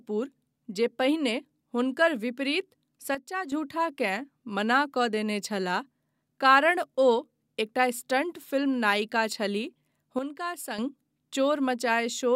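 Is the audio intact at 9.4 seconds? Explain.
Yes, the audio is intact at 9.4 seconds, with no fault heard there.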